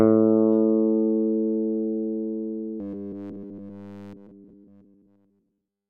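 From 2.80 s to the end, robotic sound from repeated short buffers: a steady metallic 100 Hz buzz, likely from one 10 ms chunk looping, not silent gaps like dropouts.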